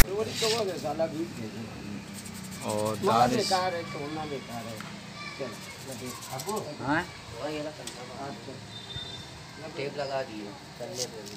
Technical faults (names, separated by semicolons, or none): file tags played as audio